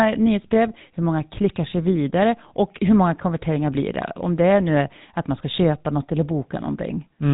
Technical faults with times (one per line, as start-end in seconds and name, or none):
0.00-7.33 GSM full-rate codec